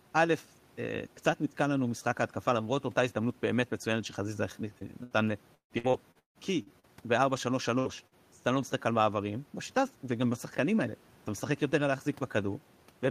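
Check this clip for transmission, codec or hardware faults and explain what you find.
The clip is speech with transmission faults from packet loss clustered between about 4.8 and 8.1 s; the room noise sits about 33 dB below the speech.

Short concealed packet loss at 4.79–4.84 s and 8.07–8.15 s: the receiver extended the preceding sound to cover missing packets, giving brief smears or wobbles.

Lost packet rebuilt from error correction at 4.81–4.83 s and 7.85–7.87 s: a 20 ms frame was played from its low-bitrate copy in the next packet, so it sounds rougher and noisier.

Burst of packet loss at 5.03–5.14 s and 7.79–7.88 s: roughly 80 ms and 60 ms went missing. The concealment became a fading buzz or hiss before the speech resumed further on.

Repeated packet loss (robotic sound) from 5.55 to 6.86 s: seven gaps, the longest 156 ms, cover 38% of that stretch, with a few tens of milliseconds rebuilt from error correction. 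The result is choppy speech with pieces missing.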